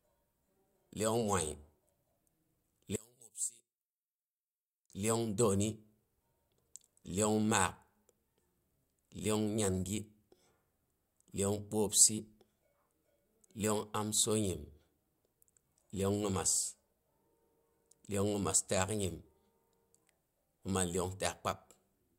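From about 2.96 to 4.90 s the speech sinks by about 16 dB and goes faint, as if the centre fell out. That's likely one channel inverted: with a stereo channel's polarity flipped, the shared centre cancels on summing to mono.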